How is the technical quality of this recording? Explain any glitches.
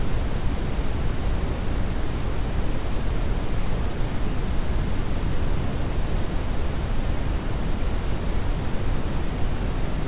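Nothing stood out on listening to this recording of everyday sounds, which arrives over a G.711 call path with nothing above 4 kHz.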